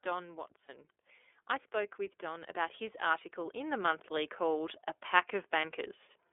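Speech runs through the iLBC codec for the whole clip, and its damage is plainly audible. The audio is confined to a telephone band of roughly 300 Hz to 3.5 kHz. On top of that narrowing, the voice has a rough, slightly synthetic grain. That grain is what separates codec coding from a simple band-limiting filter, which would sound muffled but smooth. The texture fits iLBC at 13.33 kbps with 30 ms frames.

Lost iLBC frames occur twice, at 0.66 to 0.70 s and at 5.60 to 5.65 s, each about 30 ms of missing signal. Neither gap is heard as silence or a click. The decoder fills each one by repeating the last pitch cycle blended with noise, so a brief held, faintly buzzy vowel stands in for the missing sound. Because each iLBC frame is coded independently, the voice snaps back to normal immediately afterwards. A codec with inter-frame memory would smear the damage on for longer.

Automatic gain rising runs from 1.71 to 4.88 s and lifts the level by about 8 dB. 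The voice and the background noise grow louder together and gradually over those three seconds. That joint swell marks it as a gain stage reacting to a quiet input. A speaker raising their voice would lift the speech alone and would also change its tone.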